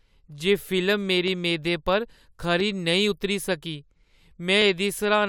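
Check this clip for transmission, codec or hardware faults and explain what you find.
There is one fault in the speech, occurring twice.

Dropped samples at 1.28 s and 2.60 s: each is a single sharp click. The likely cause is a tiny gap in the sample stream, a fraction of a millisecond long, so the waveform leaps straight from one value to a later one. The gap is far too brief to remove any audible sound, but the sudden step is heard as a crisp tick and shows as a thin vertical line across the spectrum.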